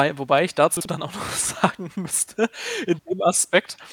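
Chunks out of order at 0.77–0.85 s, just after "wobei ich": a 43 ms chunk played one chunk late, giving a jumbled blip.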